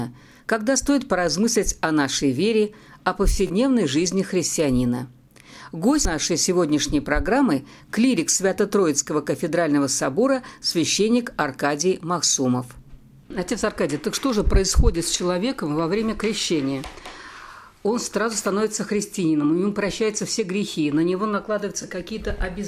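At 3.47 to 3.50 s a short slice of sound repeats as a brief buzzy stutter, and the audio then resumes about 27 ms further on, as though it had kept playing. A shorter, single catch follows at 21.82 s, skipping about 13 ms. Both are Bluetooth stutter: packets arrived late or not at all, and the receiver replayed its last buffer until fresh data came. The first gap fits two lost packets and the second fits one.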